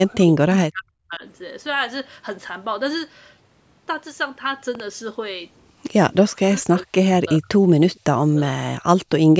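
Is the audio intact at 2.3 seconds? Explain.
Yes, the speech at 2.3 seconds is intact, with only the ordinary call microphone processing audible as the usual trimming of the lowest bass and no content above 8 kHz.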